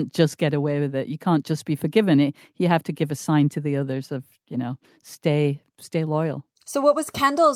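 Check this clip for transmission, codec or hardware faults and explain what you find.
Nothing stood out on listening to this speech clip.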